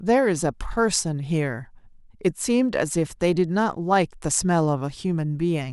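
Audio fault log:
No fault is heard in this speech clip.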